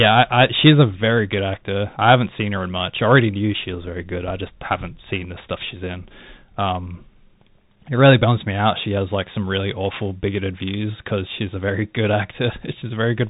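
The speech runs through a Bluetooth CVSD headset codec for its whole length, coding each sample as a single up-or-down bit with an adapting step, which fits a 64 kbps link. Nothing passes above 3.8 kHz, and where the step cannot keep up, s sounds turn scratchy and loud high sounds distort, while a granular hiss sits underneath.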